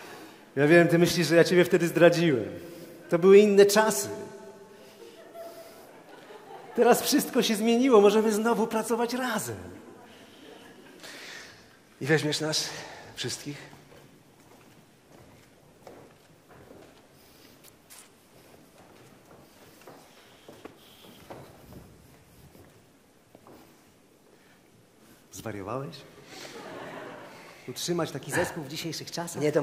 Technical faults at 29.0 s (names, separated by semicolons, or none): wrong sample rate